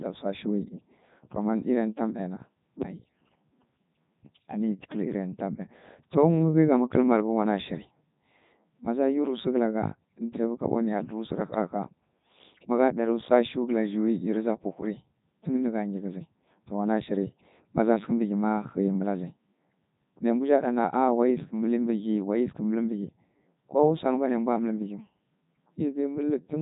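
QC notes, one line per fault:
Throughout, Codec 2 vocoder: speech was reduced to pitch, voicing, energy and a spectral envelope, then rebuilt from sine waves, discarding the original waveform. The result is heavily robotic and buzzy, with nothing above 3.8 kHz, which fits the 3.2 kbit/s mode.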